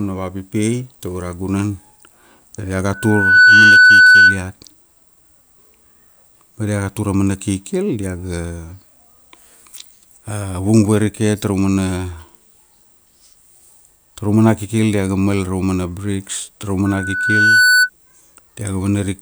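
At 2.93 s and again at 16.85 s, loudspeaker feedback squeal swells over roughly half a second (about 0.7 s the second time) into a steady 1.5 kHz tone about 10 dB above the speech. Unlike a fixed interference whine, it grows from the mic-to-speaker loop.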